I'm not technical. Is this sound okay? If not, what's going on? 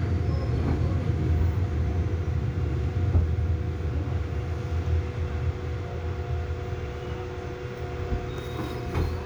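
Yes, this sound is okay. Nothing in it stands out as a technical problem, so there is nothing here that needs fixing.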